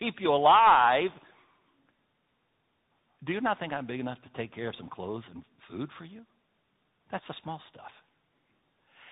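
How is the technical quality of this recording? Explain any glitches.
The quality is limited by tandem speech coding, present for the whole clip. The signal passed through two speech codecs in succession, with a telephone-grade link between them, and the sound is consistent with an AMR-NB stage followed by a CVSD stage. Each coder approximated the previous one's already degraded output, so their errors compounded. The result is rough, muffled and warbly speech, with nothing present above about 3.8 kHz.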